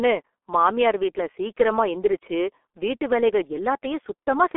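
The G.723.1 codec shapes the whole clip, from start to finish. This early internet-telephony coder squeezes speech into a very low data rate, and the heavy damage here points to roughly 6.3 kbit/s. It carries only a 300 Hz to 3.4 kHz telephone band, with nothing at all above 3.8 kHz, so the speech sounds muffled. Its slowly updated voice model, working in coarse 30 ms frames, adds a hoarse, buzzy grain and smears consonants together.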